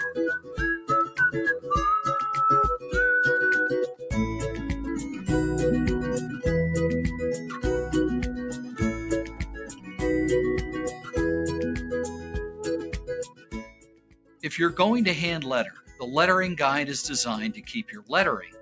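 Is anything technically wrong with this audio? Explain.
Yes. A noise suppressor built for speech was left running on this audio, so it treats steady tones, ambience and reverberant tails as noise to be removed. Its gain swings by roughly 15 dB as it decides what to keep. Attacks pass while anything held or decaying is pulled down, so throughout the clip the sound pumps and thins, with level surging on transients and sagging between them.

Sound cut by the noise suppressor happens at seven points: 0.39 to 0.59 s (about 13 dB down), 2.79 to 2.94 s (about 12 dB), 8.52 to 8.81 s (about 8 dB), 8.98 to 10.02 s (about 12 dB), 10.65 to 11.17 s (about 11 dB), 11.78 to 14.43 s (about 14 dB, the longest stretch) and 15.77 to 16.0 s (about 12 dB). In each, the suppressor judged sustained or fading material to be noise and attenuated it harder than its surroundings. Decays collapse early and held sound dips audibly, while any sudden onsets still come through. 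Separately, the call microphone processing leaves nothing above 8 kHz.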